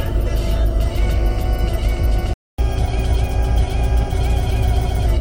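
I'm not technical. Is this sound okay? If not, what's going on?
No. At 2.34 seconds the sound stops dead and stays silent for about a quarter of a second, until 2.58 seconds. This is a playback stall: the player most likely ran short of incoming data, or was briefly held up by something else on the device, so it had nothing to send to the speakers. When it recovered, the sound picked up again, leaving a clear hole in the middle.

From 2.58 to 5.06 seconds you hear catch-up at higher speed. Having fallen behind during that gap, the player runs through the waiting audio about 1.1 times faster than normal to make up the lost time. Because the sound is sped up rather than skipped, the pitch goes up too, by roughly a semitone and a half, so everything sounds slightly hurried and higher. At 5.06 seconds it settles back to normal speed.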